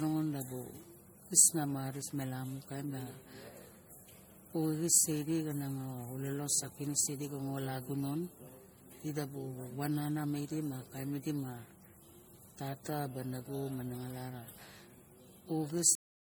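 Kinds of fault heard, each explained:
generation loss: the speech sounds swirly, smeared and hollow with blurred attacks, likely from several rounds of MP3 encoding, around 64 kbit/s each time.
cut-off end: at 15.95 s the speech just stops mid-sound and drops straight to digital silence, no decay, since the final buffers never got played.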